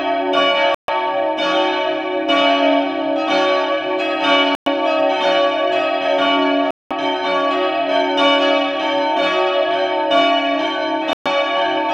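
Four short dropouts where the sound just cuts to silence and then carries on: at 0.75 s (about 137 ms of silence), 4.55 s (112 ms), 6.71 s (the longest, 199 ms) and 11.13 s (124 ms). That pattern is likely a Bluetooth stall, where interference delays packets, the headphones' buffer runs empty, and playback pauses until the resent data arrives and picks up again.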